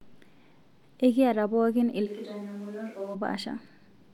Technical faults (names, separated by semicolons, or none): switch to a distant microphone